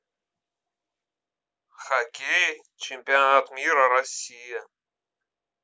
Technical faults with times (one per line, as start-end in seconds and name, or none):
none